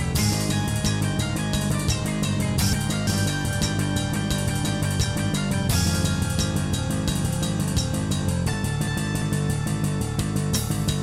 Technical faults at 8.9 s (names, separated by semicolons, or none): chunks out of order